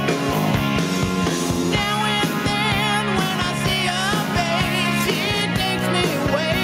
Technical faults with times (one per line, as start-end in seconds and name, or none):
0.00-6.63 gain pumping